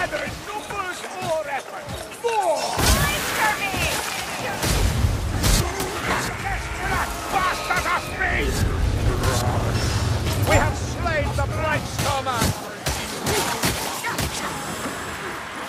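Nothing stood out as a technical problem on listening to this audio.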